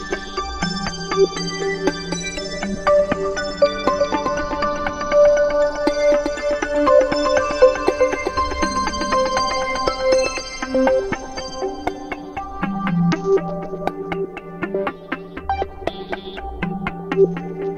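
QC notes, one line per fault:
3.84–10.40 s, doubled audio track: a second full-band copy runs roughly 0.4 s behind, about 5 dB quieter, likely from a slower capture path or misaligned edit. Unlike echo or reverb, it has no decay or room colour and cuts in and out abruptly.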